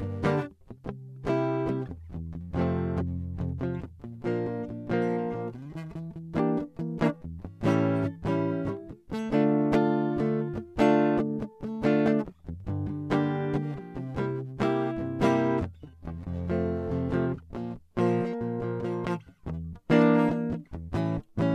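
Nothing in this music stands out as a technical fault anywhere along the way, so there's nothing here to flag.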